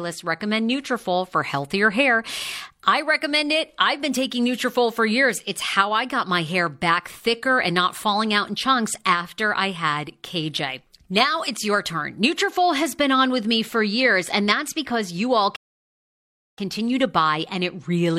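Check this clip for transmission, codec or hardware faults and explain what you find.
One fault turns up in this speech clip, a rebuffering stall from 15.56 to 16.58 s. Right after "that's because you all", playback runs out of downloaded audio and halts until more data arrives, adding about 1.02 s of silence. The speech then picks up exactly where it stopped, with nothing skipped. On a waveform this is a flat, empty gap; a spectrogram shows a clean blank column across all frequencies, with matching content on either side.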